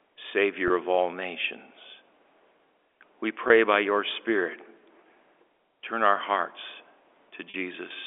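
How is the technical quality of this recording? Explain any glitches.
It's telephone-band speech with three brief packet-loss-with-pitch-repetition glitches, and the G.711 line audibly confines everything to roughly 300 Hz to 3.5 kHz.

The dropouts land at 0.68 to 0.70 s, right before "of all nations", at 3.48 to 3.50 s, just ahead of "by your", and at 7.50 to 7.54 s. The first two are about 20 ms each, which fits a single lost packet. The last is 40 ms, likely two in a row. Each time the receiver loops the last pitch cycle to fill the hole, so you hear a tiny held, slightly buzzy blip. The 40 ms one stretches that buzz a little longer.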